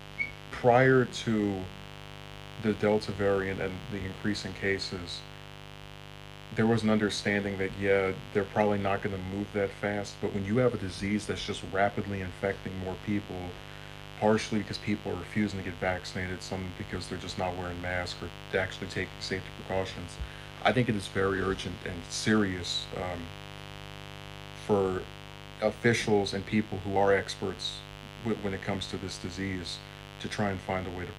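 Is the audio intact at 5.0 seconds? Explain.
No, not really. Mains buzz runs through the whole clip, so it's there at 5.0 seconds too. Sharp switching spikes, twice per 50 Hz cycle, pile up harmonics into the kilohertz range, giving a steady, raspy buzz sitting fairly close under the sound.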